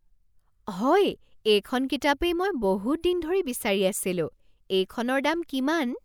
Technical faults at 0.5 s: none

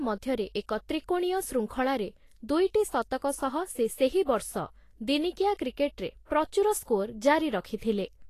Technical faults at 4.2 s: Vorbis compression

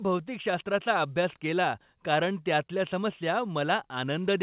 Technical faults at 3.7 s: none

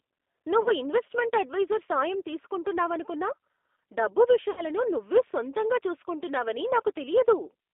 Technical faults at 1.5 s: G.729 codec

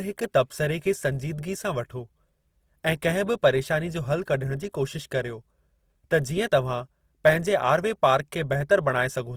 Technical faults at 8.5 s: Opus compression

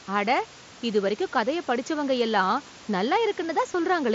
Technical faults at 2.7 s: concealed Bluetooth headset packet loss

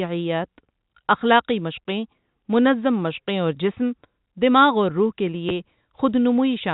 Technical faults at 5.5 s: packet loss with last packet repeated

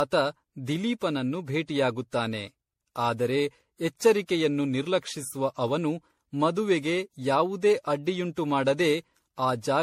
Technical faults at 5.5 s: generation loss

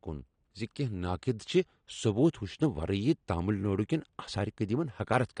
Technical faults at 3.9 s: AAC compression

